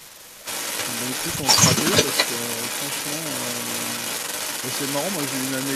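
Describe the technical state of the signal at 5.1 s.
At 5.1 s the speech is doubled by a delayed copy trailing it by 288 ms, and that copy sits a little louder than the direct speech. This echo leak runs through the whole clip, from 0.0 to 5.75 s. The likely cause is a far end playing the call on a loudspeaker, where the echo canceller failed to remove what its microphone picked up and sent it back down the line.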